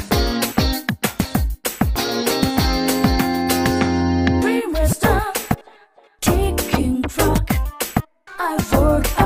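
Nothing technically wrong turns up anywhere in this audio, so there's no fault to point to.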